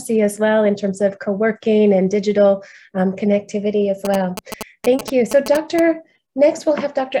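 GSM signalling bursts, 4.05 to 5.8 s: a nearby 2G phone's pulses are rectified into galloping 217 Hz buzzes, roughly 10 dB down.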